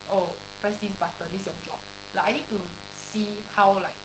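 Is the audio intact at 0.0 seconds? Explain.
No. At 0.0 s the speech already carries mains buzz that runs the whole clip. Sharp switching spikes, twice per 50 Hz cycle, are leaking into the signal path, stacking harmonics far up the spectrum. The result is a steady, raspy buzz sitting not far below the speech.

Opus voice compression is also present from the first moment to the end. The SILK linear-prediction coder is working at a bitrate that sounds close to 12 kbps, modelling the excitation coarsely and cutting everything above about 8.7 kHz. The voice sounds dull, hoarse and faintly robotic.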